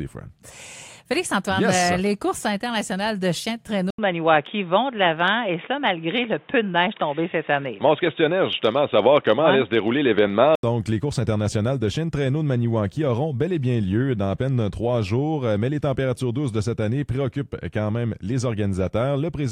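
At 3.90 s a brief gap of about 80 ms opens, and the sound turns dull and boxy, with nothing above 3.8 kHz, a level shift of a few decibels and a faint new background noise sitting well below the signal. At 10.63 s the full bandwidth returns. This points to an input switched to a poorer device, likely a fallback microphone or a headset's narrowband call profile with its own tone and noise floor.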